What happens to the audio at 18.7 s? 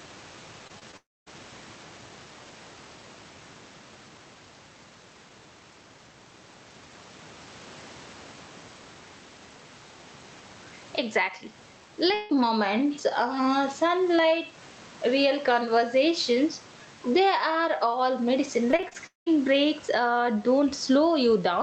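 From 18.71 to 19.28 s there is repeated packet loss: six dropouts, the longest about 0.2 s, each patched by extending the previous sound, leaving roughly half the span concealed and sounding choppy and robotic. Gain pumping also runs through it, with the gain swinging by around 10 dB, likely from excessive input gain driving a fast limiter.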